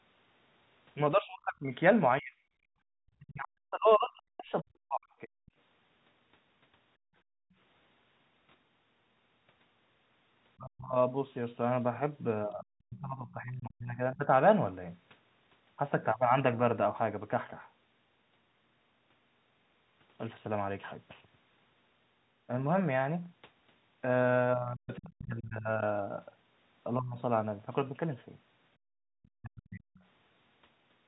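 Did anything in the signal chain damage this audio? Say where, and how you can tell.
Yes, and it's all in the call processing stage, specifically the echo canceller, not the wiring or the G.711 A-law coding.

Speech suppressed in double talk shows up three times: 1.13 to 5.31 s, 10.58 to 14.29 s, and 24.55 to 29.82 s. The talker's level keeps collapsing in pieces, at worst by about 40 dB, adding up to roughly 3 s, 2 s and 1.5 s of damage in those spans. The likely story is that the far end was talking at the same moments. The canceller couldn't separate the talker from the loudspeaker echo, so it pulled both down.

There's also the other side's voice leaking through in three places. At 5.46 s and 12.5 s it's just a brief scrap, each around 50 to 70 ms. A longer stretch runs from 29.23 to 30.01 s. It sits well down, roughly 30 to 35 dB under the talker. That's most likely loudspeaker sound the canceller failed to subtract from the mic before it went out.

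Finally, there's background gated by the echo canceller at 6.97 to 7.56 s and 28.77 to 29.12 s. The room tone drops by about 33 dB and then about 34 dB, for around half a second and 0.4 s, and comes straight back afterwards. That's the canceller clamping the mic hard while the loudspeaker was active, then releasing once it decided the echo had cleared.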